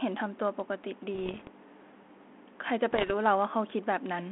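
Bit errors on the ADPCM link, which sounds like 32 kbit/s G.726 telephone-band speech, cause pops and rough, level-jumping bursts from 1.14 to 1.50 s and 2.91 to 3.12 s, at roughly 0.7 and 1 percent. Each flipped bit derails the decoder's step size and predictor, so the damage rings on briefly.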